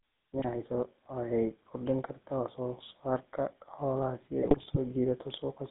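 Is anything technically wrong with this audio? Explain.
Yes. The speech runs through the GSM full-rate codec for its whole length, and GSM bit errors corrupt it twice.

GSM full-rate codec, throughout: the vocal tract is modelled as a filter excited by coarse, regularly spaced pulses, which fits the 13 kbps full-rate coder. The voice sounds plainly buzzy and gravelly. A spectrogram shows energy confined to roughly 200 Hz to 3.7 kHz, with smeared, grainy harmonics.

GSM bit errors, 0.38 to 0.45 s and 4.42 to 4.78 s: corrupted filter, pitch or gain values reach the decoder, so frames come out with a bent spectrum or a level spike. The voice squawks, pops and gargles, briefly in the first burst and for longer in the second. The waveform shows jagged amplitude jumps, and the spectrogram shows blotchy, misplaced energy in short frame-sized blocks.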